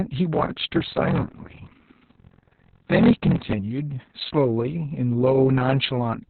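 Speech with heavy Opus voice compression throughout: nothing survives above 4.3 kHz, and the SILK-coded voice sounds muffled, hoarse and faintly robotic, which points to a rate around 6 kbps. Unlike plain telephone band-limiting, the coarse excitation coding roughens the voice itself.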